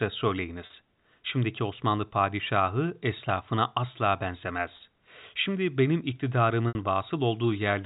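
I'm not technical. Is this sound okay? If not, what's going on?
No. There is packet loss with pitch repetition at 0.66, 4.77 and 6.69 seconds. Bits of the speech went missing in transit, about 40, 30 and 70 milliseconds long, and the receiver patched each gap by repeating the last tiny slice of voice. The first two sound like a brief buzzy hold. The 70 ms one fades toward silence before speech returns. Unlike a plain dropout, the gap is filled rather than cut, all within the narrow telephone sound.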